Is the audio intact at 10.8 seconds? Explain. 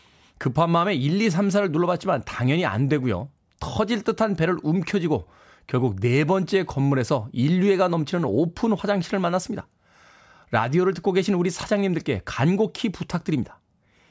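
Yes, the speech at 10.8 seconds plays through cleanly, with no dropout, click, distortion or other fault at that moment.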